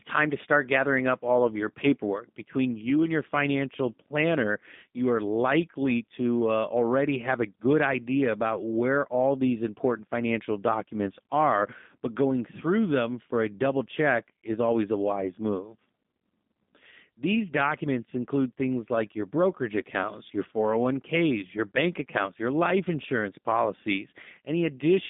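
Throughout, G.729 coding is plainly audible: the speech is rebuilt from a vocal tract filter and pulse excitation, which fits an 8 kbit/s G.729A stream. It sounds rough and synthetic, confined to roughly 200 Hz to 3.6 kHz, with nothing above 3.7 kHz.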